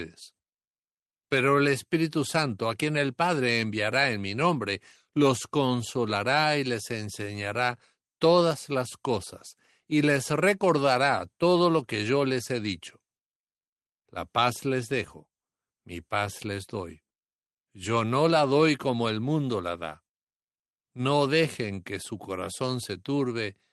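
The clip is speech with no technical faults. It has passed through a working call path, and its top end rolls off around 12 kHz with the coding texture of a low-bitrate Opus stream, which fits a setting near 24 kbps.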